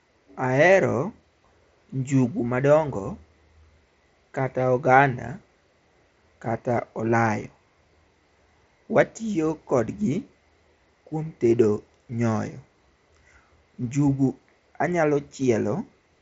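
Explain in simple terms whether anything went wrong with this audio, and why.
Nothing went wrong here: the speech simply came through a Bluetooth headset link, the kind that carries sound up to about 8 kHz, and that link was doing its normal job the whole way.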